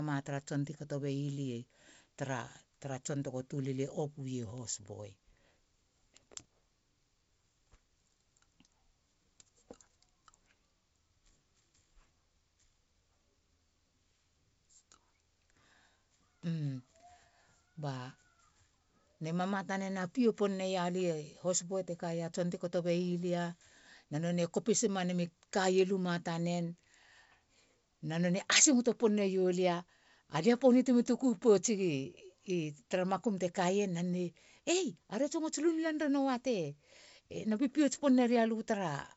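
No technical faults can be heard in the speech, which arrives over a call path whose wideband codec leaves nothing above 8 kHz, a band limit that fits G.722 running at 64 kbps.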